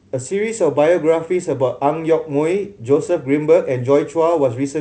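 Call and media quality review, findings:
No faults found in this speech clip; G.722 wideband coding at 64 kbit/s, with coding damage at most faint.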